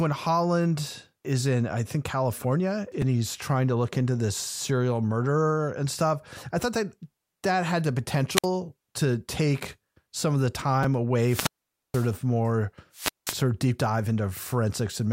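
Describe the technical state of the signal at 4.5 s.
At 4.5 s the speech signal is intact, with no audible technical fault at that moment.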